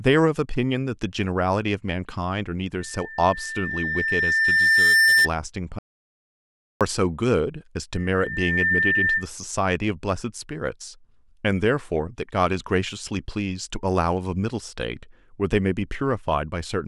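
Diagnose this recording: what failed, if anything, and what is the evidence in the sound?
The fault sits in the acoustic and analogue path, where a microphone hears the loudspeaker it feeds: a loudspeaker feedback squeal. From 2.79 to 5.29 s a single 1.8 kHz tone swells over roughly two seconds to about 10 dB above the speech. It returns at the same pitch from 7.92 to 9.28 s, building in under a second to about 5 dB above. Unlike a steady interfering tone or hum, it grows by itself because the loop gain exceeds one at that frequency.

From 5.79 to 6.81 s the audio suffers an audio dropout to silence, a gap of about 1.02 s. The speech cuts off mid-flow and returns abruptly, and the gap is silent with no room tone. That absence of room tone separates it from a noise gate or a fade, which leave residual background or taper gradually. The likely cause is a lost input at the device, driver or link stage while the recorder kept writing samples.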